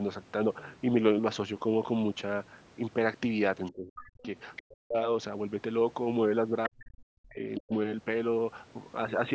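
Scraps of the other side's voice leaking through show up at 3.67–3.71 s, 4.22–4.26 s, 4.56–4.62 s and 7.55–7.60 s. They rise from roughly 35 dB below the speech to roughly 10 dB below it by the last one, likely from the loudspeaker echo the canceller didn't fully remove. Close to most of those scraps the speech dips hard, roughly 40 dB down at the deepest, at 3.72–4.24 s, 4.59–4.96 s, 6.68–7.39 s and 7.59–7.73 s. That's speech suppressed in double talk: the canceller likely couldn't separate the two sides and turned both down.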